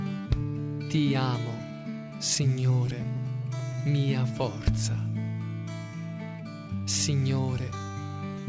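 From 1.92 to 3.77 s there are repeated stalls (stutter). The jitter buffer ran dry thirteen times as packets arrived late, and each time the receiver extended the last bit of sound to bridge the gap. The gaps are short, the longest about 16 ms, totalling 144 ms, or about 8% of that span, and nothing is lost. The audio hitches and drags in small catches rather than dropping out.

Immediately after, from 3.79 to 4.77 s, comes a jitter buffer slow-down. With its reserve depleted, the receiver rebuilt it by repeating single pitch periods and fragments of pauses, inserting 83 ms in total. Playback runs at 92% speed with the pitch unchanged. Sounds are stretched slightly.

From 6.80 to 7.80 s there is a jitter buffer speed-up. Here the buffer held more audio than its target, so the receiver trimmed short pieces of one or a few pitch periods in succession, removing roughly 70 ms. Playback runs at 105% speed with the pitch unchanged, and the passage sounds slightly hurried.

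Across the whole clip, nothing is present above 8 kHz, which fits a wideband call codec such as G.722.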